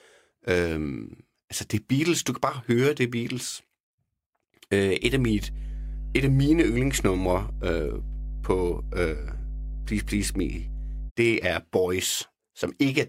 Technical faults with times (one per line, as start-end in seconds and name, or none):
5.01-11.11 mains hum